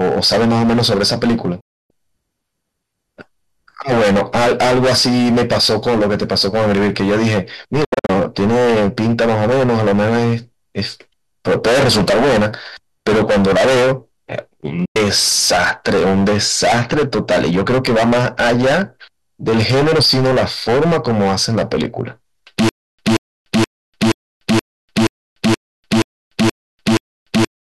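A speech clip with a harsh, constant fuzz on every loud syllable: hard clipping, the level driven about 20 dB past what a stage could pass, so roughly a third of the waveform has its peaks sliced flat, spraying harmonics high into the spectrum. The sound also cuts out with quick 8 ms fades at 1.60 to 1.91 s, at 14.85 to 14.96 s, and at 7.84 to 8.10 s, where it breaks into several short holes, the longest 72 ms. This is a digital broadcast dropout: the receiver muted while frames failed or went missing, so that material is gone. From 22.69 s to the end, a 180 ms burst repeats ten times, each followed by about 295 ms of dead silence, a cycle of 476 ms. This is stutter with silent gaps, most likely a stalled player replaying its last fragment at each retry before running empty.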